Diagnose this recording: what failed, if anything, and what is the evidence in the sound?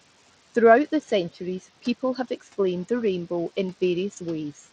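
Codec stage: across the whole clip the treble is thin and flickers, with a gritty noise and aliasing riding on the speech. The likely cause is Bluetooth SBC compression at a starved bit pool, which fits a bitrate around 80 kbps. The weak upper sub-bands get few bits, and the rest are coarsely quantised.

Call processing stage: between 1.82 and 2.18 s, parts of the speech drop by about 14 dB, roughly a tenth of a second in total, and sound swallowed. This is speech cut by the noise suppressor. It classed those speech fragments as noise and attenuated them along with the room background.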